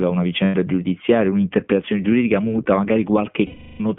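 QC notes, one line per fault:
throughout: iLBC codec. The speech is confined to a narrow telephone band of roughly 150 Hz to 3.4 kHz, with nothing above 4 kHz, and has a plainly audible rough, synthetic edge. The 15.2 kbps rate fits 20 ms frames, each coding its excitation independently of the last.
0.44 to 0.55 s and 3.46 to 3.81 s: lost iLBC frames. Packets dropped for 100 ms and then 340 ms, and the decoder filled each gap by repeating the last pitch cycle with added noise. It is heard as a held, buzzy vowel, and in the longer gap it fades. Because frames stand alone, the speech recovers cleanly right after.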